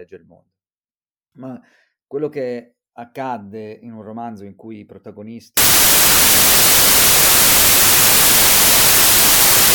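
Speech, and from 5.57 s to the end it collapses into loud noise with the talker buried underneath, running at half speed and an octave low. That's a wrong sample width. It sounds like 32-bit samples read as 16-bit, so each sample splits into two values and only the upper halves still carry the real signal.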